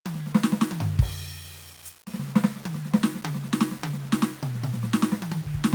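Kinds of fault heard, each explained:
Low bit depth without dither: The music sounds grainy and rough throughout, with a gritty distortion that shifts with the sound and is worst in quiet passages, where faint detail crumbles or sputters. The noise sits about 20 dB below the signal. Likely cause: the audio was rounded to very few amplitude steps, consistent with roughly 6 bits, with no dither, so the error tracks the music instead of forming a steady hiss.
Skip ahead: At 2.2 s the music lurches forward with no gap or fill. Roughly 0.4 s of material is missing, and the two sides are joined almost directly, so the flow of the passage breaks abruptly. This happens when a stretch of audio is discarded, in transit or by an overfull jitter buffer, while later audio is already queued, and playback simply resumes further along.
Jitter buffer speed-up: From 2.32 s to 3.99 s the music runs slightly fast, at about 107% speed, while its pitch stays the same, so the tempo feels rushed and unsteady. 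The receiver was holding more audio than it aims for and trimmed the backlog by cutting many tiny pieces, one or a few pitch periods each, removing around 0.1 s in total across that stretch.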